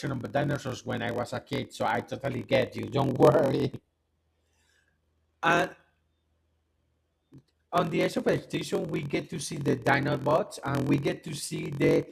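Block size mismatch (padded) runs through the whole speech clip: each block, consistent with 1024-sample reads, ends in a zero-filled gap, producing a 43.1 Hz buzz and slowing delivery to 0.938 of normal speed at about its normal pitch.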